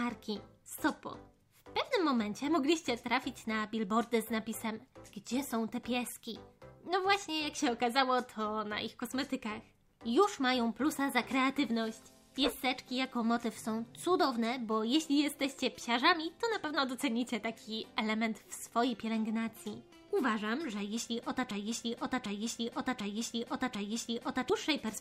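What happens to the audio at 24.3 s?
At 24.3 s you're near the end of a broken-record loop that runs from about 21.51 s to 24.50 s. A 747 ms fragment of sound plays four times back to back, each pass identical, so the audio stops moving forward and just cycles. Whatever should have played during those three seconds is gone. The likely cause is a stalled player, encoder or stream that kept resending the last chunk it had buffered.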